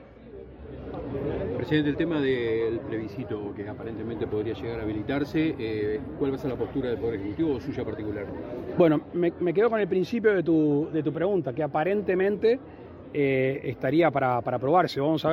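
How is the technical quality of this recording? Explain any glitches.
No glitches can be heard anywhere in the recording: the signal holds steady and continuous throughout, without any audible technical faults.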